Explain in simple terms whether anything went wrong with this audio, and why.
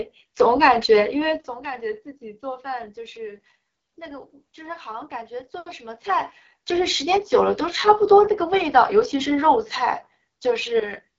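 Something did go wrong, from the first second to the last. The speech has passed through the AMR wideband (HD Voice) codec, the kind used for phone calls, set to a low quality. This codec rebuilds the voice from a simple model of the mouth and throat. At this setting the model is too coarse. So the speech sounds rough and raspy throughout. Nothing is heard above about 7.6 kHz, so it also sounds a little dull.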